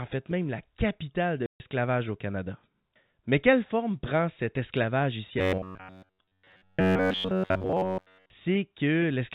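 Packet loss filled with silence at 1.46 to 1.60 s, just after "même la capitale de": a 140 ms hard-edged hole, which fits seven 20 ms packets dropped and replaced by silence.

Robotic sound from repeated short buffers from 5.39 to 8.30 s, after "prend cet esclavage ici": a rigid, metallic 93.8 Hz buzz, likely from one roughly 10.7 ms buffer replaying while most of the real audio is skipped. Throughout, the telephone-band G.711 coding cuts everything above 4 kHz.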